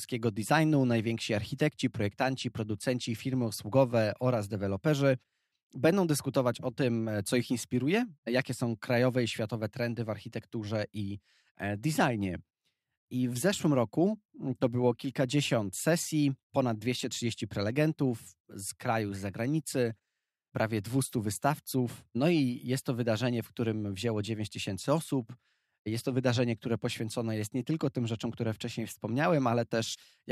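No technical faults can be heard anywhere in this speech recording.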